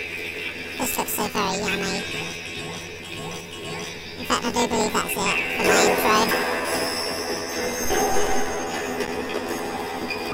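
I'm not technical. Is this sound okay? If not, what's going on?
No. The whole clip suffers from planar audio read as interleaved: the left and right channels were stored as separate 24 ms blocks, but the player read them as if they alternated. Each block plays twice at double speed, so everything sounds an octave high with a buzzy flutter about 42 times a second.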